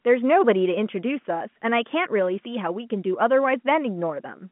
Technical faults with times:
none

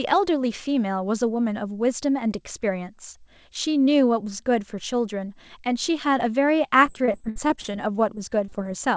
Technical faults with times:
6.86-7.75 repeated packet loss (robotic sound)
8.15-8.68 repeated packet loss (robotic sound)

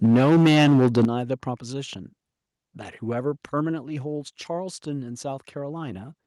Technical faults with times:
0.04-1.05 microphone overload
0.06 microphone volume stepped down
1.05 microphone volume stepped down

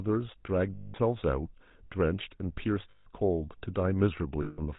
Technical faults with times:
0.00-4.79 GSM full-rate codec
0.74-0.95 lost GSM frames
2.90-3.09 lost GSM frames
4.42-4.60 lost GSM frames

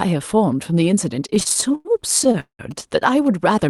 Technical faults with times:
1.19-2.61 repeated stalls (stutter)
2.71-3.69 GSM signalling bursts

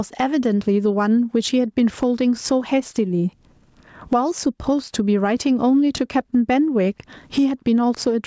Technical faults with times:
0.00-8.27 gain pumping

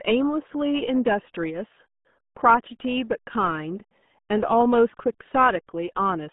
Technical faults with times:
0.00-6.32 RealAudio 14.4 codec

